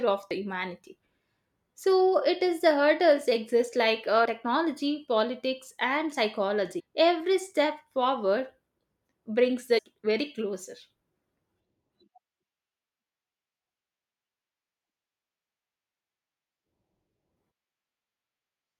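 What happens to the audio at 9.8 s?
At 9.77 to 9.79 s, right before "very closer", damaged data in the compressed stream makes the decoder lose sync and hunt for the next frame, leaving a brief glitch.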